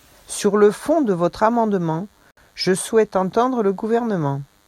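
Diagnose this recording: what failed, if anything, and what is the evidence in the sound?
DECT cordless phone buzz, throughout: a thin 100 Hz buzz rich in harmonics, roughly 40 dB below the speech, enters at the analogue wiring, which rectifies a nearby handset's radio bursts every 10 ms.

Gap at a join of encoded pieces, 2.31 to 2.37 s: 60 ms of silence between "fond de votre amendement" and "je souhaite entendre", where separately encoded pieces were joined with their codec delay and padding left untrimmed.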